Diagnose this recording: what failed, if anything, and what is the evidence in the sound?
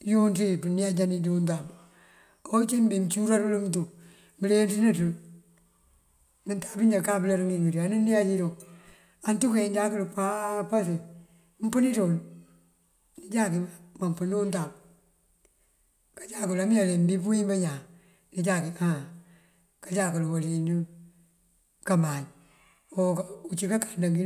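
Nothing failed here as far as I can hear: the speech runs along without anything in the sound pointing to a problem at any stage of the chain.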